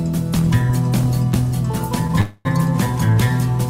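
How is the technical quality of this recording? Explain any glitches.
There is one glitch, a call audio freeze from 2.21 to 2.47 s. The last sound is stretched into a fading buzz or hiss for about 245 ms, then the audio resumes where it stopped, with nothing lost but everything after it shifted later by 245 ms. The likely cause is delayed packets draining the jitter buffer, so the receiver had to fill the gap.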